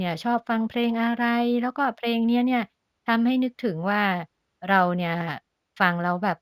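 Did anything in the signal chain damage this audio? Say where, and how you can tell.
Yes. Sample-rate conversion shows imaging from linear upsampling throughout, fitting a 16 kHz source. The top dulls, and faint 8–16 kHz images, roughly 40 dB down, lend sibilants a metallic shimmer.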